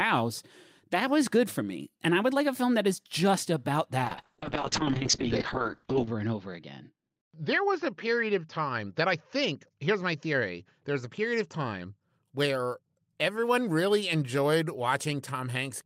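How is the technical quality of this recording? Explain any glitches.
The quality suffers from one sustained glitch, a call bitrate drop, from 4.05 s to 12.09 s. The call's bandwidth estimate fell, so the encoder was forced onto far fewer bits, which fits a drop from about 32 kbps to roughly 6 kbps. With so little data the coding turns coarse and the top end is cut, here from about 20 kHz down to 8 kHz. The speech sounds rough, watery and muffled, worst for about 2.03 s at the lowest rate, before clarity returns.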